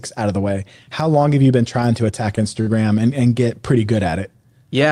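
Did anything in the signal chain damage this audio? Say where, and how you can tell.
Yes. The damage happened on the network, at the receiver's jitter buffer. There is a short stall from a late packet between 2.61 and 2.70 s, right after "been trying to attack" and before "and and get pretty". A packet missed its slot and the buffer ran dry. The receiver held the last sound for 54 ms, with a faint buzzy dip, then picked up where it left off. Nothing is lost. Everything after it simply runs 54 ms later.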